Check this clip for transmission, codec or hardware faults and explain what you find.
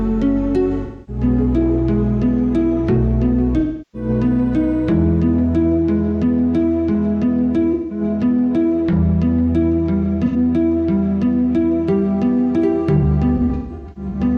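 The clip has a transmission fault: AAC frame loss with concealment, heard five times. It occurs at 0.82 to 1.23 s, 3.59 to 4.09 s, 7.73 to 8.01 s, 10.25 to 10.36 s, and in scattered form from 12.98 to 14.20 s. Whole coded blocks never reached the decoder, so it rebuilt each gap from the last good spectrum. Those patches sound smeared, noisy and phasey, lasting about 85 to 340 ms, which points to dropouts of two to eight frames. The final stretch is broken up, with the longest run about 150 ms.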